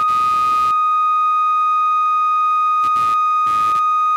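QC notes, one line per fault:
Throughout, computer activity noise: a buzzy chirp pulsing around 100 Hz, about 25 dB under the music, as computer load shifts the shared audio ground.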